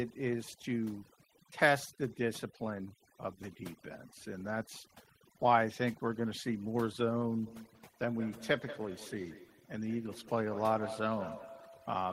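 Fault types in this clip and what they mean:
Overdone noise removal: A noise reduction stage was set far too aggressively, so any frequency band sitting near its noise estimate gets pulled right down or switched off, and the quieter parts of the speech are removed along with the noise. Throughout the clip the background collapses to near silence dotted with small twinkling specks.
Feedback echo between two devices: A second device in the same room is playing back what the first microphone sent, and that microphone picks the playback up again, while each echo canceller only removes its own device's output. From about 7.47 s to the end, every word comes back roughly a fifth of a second later, peaking about 13 dB below the direct speech, as a distinct delayed copy trailing the voice.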